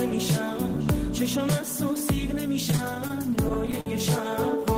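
From 2.71 to 3.89 s the sound drags and stutters, catching on itself in more than a dozen short hitches, the longest around 53 ms. These are repeated stalls (stutter): data reached the receiver late or too slowly, so its jitter buffer kept running dry. Each time, the last sound was stretched to fill the wait, about 186 ms in all, roughly a sixth of that stretch. Nothing is lost, but the flow limps.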